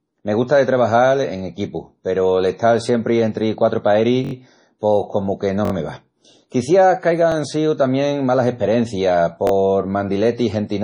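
Speech throughout carries MP3 compression damage: nothing reaches above 10.4 kHz, and the sound has a watery, swirling quality with smeared consonant attacks. This is likely heavy encoding at a low bitrate, around 32 kbps, where the encoder cuts the treble and drops weak frequency lines that flicker frame to frame. Repeated buffer stutters occur at 1.39–1.41 s, 4.25–4.33 s, 5.65–5.72 s, 7.32–7.34 s and 9.47–9.52 s. Each time, new audio arrived late and the device replayed the same 21 ms piece with a hard join, which fits a 1024-sample buffer. The longer stretches at 4.25 s and 5.65 s, with four and three extra plays, become a short stutter.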